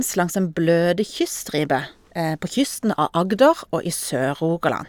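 No technical faults can be heard anywhere in this recording.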